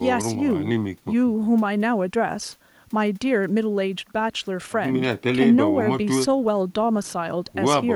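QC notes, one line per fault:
No faults found in this speech clip. Nothing in it calls for a QC entry.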